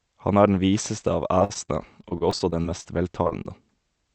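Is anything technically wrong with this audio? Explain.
Yes. Speech passing through a call path whose output stops at about 8 kHz has two kinds of packet loss.

Repeated packet loss (robotic sound) runs from 1.39 to 2.87 s, starting right after "er den viseste av". About a dozen holes, the longest 50 ms, were each filled by extending the preceding sound, so roughly a fifth of that stretch is synthetic. It sounds choppy and robotic. On a spectrogram, harmonics smear flat and repeat in short blocks. The waveform shows frozen, periodic segments.

Short concealed packet loss occurs three times: 3.23–3.27 s, 3.29–3.33 s and 3.43–3.47 s. Each time about 20 ms never arrived, and the decoder bridged the gap with a continuation of the last sound before fading back in. The result is a brief smear or wobble. On a spectrogram, each is a narrow vertical band where detail blurs into a held pitch or noise.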